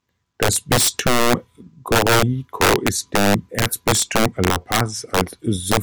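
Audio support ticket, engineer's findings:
Integer overflow, throughout. Violent cracks on loud speech peaks, far sharper than clipping. Gain stage overdriven by about 10 dB; a few percent of samples exceed full scale and wrap to opposite sign instead of saturating. Probable fixed-point mixer or gain lacking saturation.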